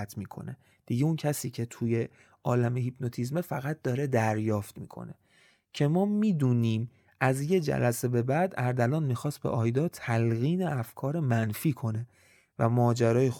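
A speech recording with no audible technical faults.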